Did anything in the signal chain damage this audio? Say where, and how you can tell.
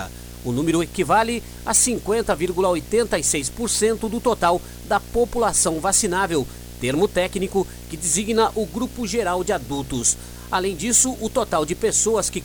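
Yes, there's video or display buzz from start to finish: a fairly strong 60 Hz field-rate buzz with hash above it, from a screen or video cable coupling into the analogue wiring.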